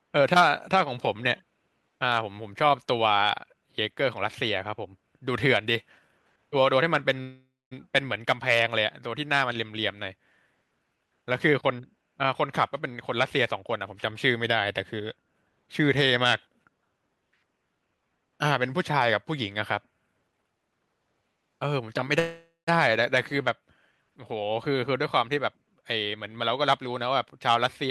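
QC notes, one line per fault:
7.21–7.73 s, call audio freeze. A fading buzz then 0.23 s of silence fill 0.5 s. Sound resumes where it stopped, likely after late packets drained the buffer.
20.32–22.05 s, jitter buffer speed-up. Speech runs at 122% speed, same pitch, sounding hurried. About 0.4 s of excess buffered audio was trimmed in short pitch-period cuts.
22.19–22.69 s, call audio freeze. A buzz fades, then 0.16 s of silence, filling 0.48 s. Speech continues from where it paused, likely because packets were held up.
24.71–26.18 s, jitter buffer speed-up. A milder 106% speed-up at unchanged pitch. Roughly a tenth of a second was removed as repeated small cuts.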